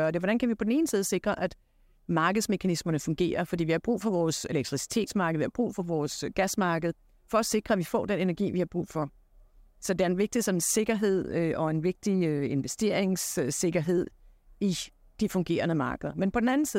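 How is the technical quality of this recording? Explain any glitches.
No technical faults can be heard in the recording; the signal stays continuous and intact throughout, with nothing that calls for explanation.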